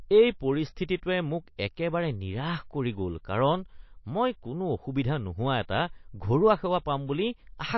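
Throughout the speech, the treble stops dead at 5.8 kHz, and weak detail flickers with a watery, swirly quality, smeared consonant attacks and metallic chirps on s sounds. The likely cause is MP3 compression at a bitrate near 29 kbps. A spectrogram would show a flat ceiling and speckled, blinking upper harmonics.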